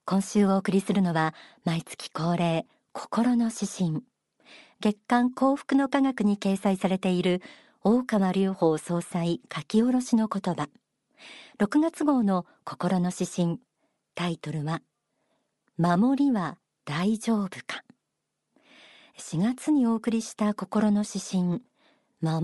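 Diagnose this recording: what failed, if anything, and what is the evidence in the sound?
Codec stage: the speech has a plainly audible breathy, grainy upper edge throughout, likely Bluetooth LC3 compression filling a thinned-out top spectrum with noise, consistent with roughly 48 kbps.

Radio link stage: lost LE Audio frames at 19.64 s. There's a brief 7.5 ms noisy smear where the decoder replayed the previous spectrum with scrambled signs, which fits one dropped frame.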